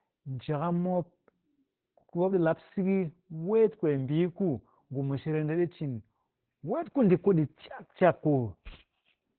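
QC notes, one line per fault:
throughout, Opus voice compression: nothing comes through above about 4.2 kHz, so the speech is squeezed into a phone-like narrow band and sounds dull and boxed in. The damage is heavy. Voiced parts turn hoarse and a bit robotic because the linear-prediction coder is describing the excitation very coarsely. That narrowband SILK-only sound points to a very low bitrate, something around 8 kbps.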